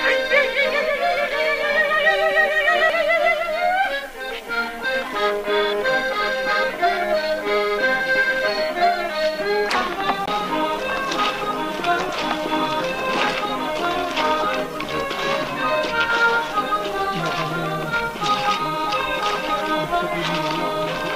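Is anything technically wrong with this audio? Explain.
Yes. At 2.90 s and 10.26 s there's a tick, a very brief dropout (longer at the second), and the audio resumes from a different point. This is a CD skip: the laser jumped to another turn of the disc's spiral, muted briefly, and carried on from there.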